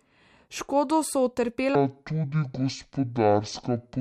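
From 1.75 s to the end, there's a section at the wrong speed: the speech drops to about 0.54x, roughly ten semitones lower, sounding deep and dragging, likely from a wrong playback clock.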